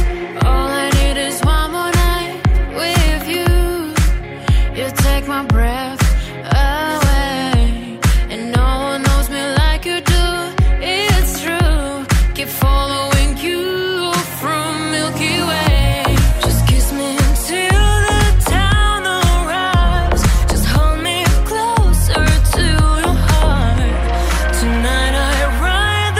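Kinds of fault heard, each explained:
No technical faults can be heard anywhere in this audio.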